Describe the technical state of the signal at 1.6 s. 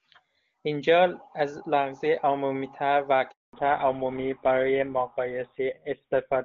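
At 1.6 s the speech is intact, carried by the AMR wideband (HD Voice) codec at its top rate of 23.85 kbit/s with no more than faint coding damage.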